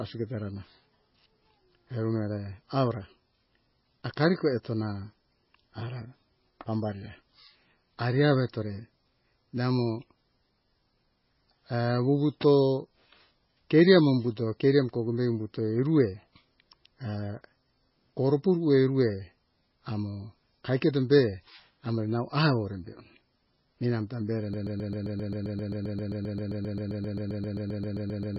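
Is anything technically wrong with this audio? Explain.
Yes, there are two faults. The whole clip shows MP3 compression artefacts. Near the end, a broken-record loop replaces the final stretch of speech.

Throughout the clip, the speech has the watery, swirly texture of heavy MP3 compression. Nothing is heard above 5.5 kHz, so the encoder has clearly cut the treble. Weak frequency lines flicker in and out between frames, and s sounds turn chirpy. This likely comes from a very low bitrate, somewhere around 17 kbps.

From 24.54 s, right after "eramta bere", a 132 ms fragment repeats back to back until the clip ends. The stall likely came from the player, encoder or stream, which kept resending its last fragment. The speech that should have followed is gone.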